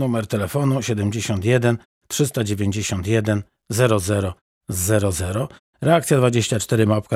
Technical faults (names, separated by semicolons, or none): none